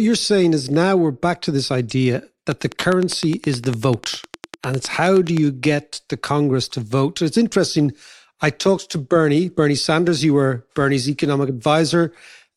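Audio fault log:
2.52–5.38 s, train of clicks: about 30 near-identical pulses at a steady 9.8 per second, peaking well above the speech and audible in pauses too, likely interference from nearby equipment. The regular spacing and matching shape distinguish it from random crackle or isolated pops.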